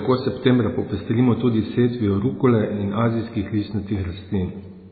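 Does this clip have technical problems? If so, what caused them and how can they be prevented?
Yes, the whole clip has a hard treble ceiling at 4.5 kHz, with a watery, swirly texture and smeared attacks on the speech. That's likely heavy MP3 compression at a very low bitrate, around 16 kbps, starving quiet frequency lines. Encode at a higher bitrate to prevent it.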